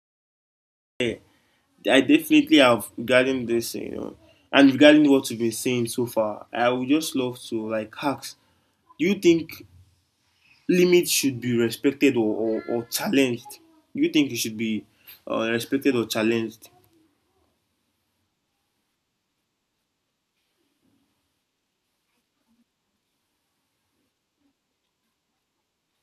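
The clip opens with about 1.00 s of digital silence. At 1.00 s the speech bursts in mid-sound, with no natural attack and no fade. This is a cut-off start. Capture or streaming began late, so the opening of the utterance was never recorded. The silence before it is digital silence, not room tone. The first sound arrives already at full level, as if sliced off, and the listener joins partway through.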